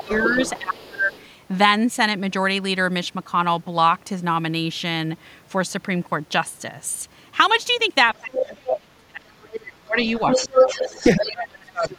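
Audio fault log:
0.00–1.12 s, 8.14–10.54 s, 11.15–11.99 s: speech suppressed in double talk. The talker's voice dips and breaks up while the other side speaks, by around 20 dB at the start and around 30 dB later. The likely cause is an echo canceller that could not separate the talker from loudspeaker echo and attenuated both.
0.00–1.25 s, 8.34–8.76 s, 9.53–9.60 s, 10.04–11.24 s, 11.82–11.89 s: other side's voice leaking through. A second voice comes through alongside the talker. It is some 15–20 dB down in the brief scraps, about 5 dB down at 8.34 s, and roughly level with the talker from 10.04 s. This is likely loudspeaker playback the echo canceller left in the microphone signal.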